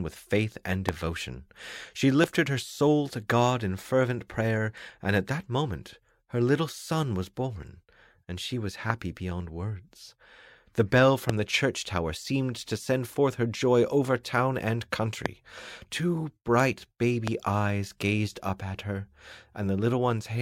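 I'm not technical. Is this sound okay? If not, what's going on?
No. There are six loud pops, at 0.89, 2.24, 8.90, 11.29, 15.26 and 17.28 seconds. Each is a single sharp burst lasting about 20 milliseconds, far louder than the sound around it. The sound carries on underneath each one. A loud pop like this is likely a sudden electrical jolt entering the signal, for example from a loose plug, a switch, static, or a brief hiccup in the audio hardware.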